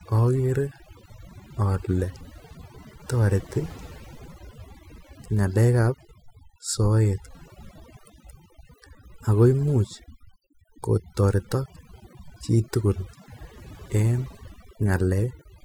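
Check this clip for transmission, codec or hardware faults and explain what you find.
One fault is present, and it runs through the whole speech clip. It is overdone noise removal. Noise reduction was applied far too strongly. Bands near the noise estimate get cut hard, taking quiet speech detail with them. The background drops and breaks up into twinkling specks.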